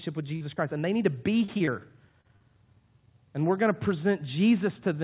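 Short concealed packet loss occurs at 0.36, 0.54 (just before "and they need to"), 1.44, 1.58 and 1.66 (both just after "they need to be"), 2.21 and 2.36 s, each losing about 20 to 40 ms. The receiver bridged each hole by extending the preceding sound and crossfading back, so you hear a brief smear or wobble rather than silence. That fill is what separates it from a plain dropout. All of it sits within narrowband audio that stops at 4 kHz.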